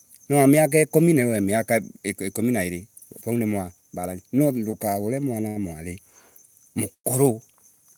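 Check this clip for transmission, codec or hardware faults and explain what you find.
The clip has three network timing faults, of two kinds. Nothing is lost in any of them. Each one adds a short delay instead.

Two short stalls from a late packet occur. The first is at 4.71 s, just after "niwalaban no", and lasts 18 ms. The second runs from 5.48 to 5.58 s, for 75 ms. Each time a packet arrived late and the jitter buffer ran empty. The last sound is held too long, with a faint buzz or dip.

A call audio freeze runs from 6.94 to 7.06 s. The last sound carries on as a fading buzz or hiss, then about 80 ms of silence. The packets were likely held up in transit, which drained the jitter buffer. Playback resumes where it stopped, leaving a 106 ms gap.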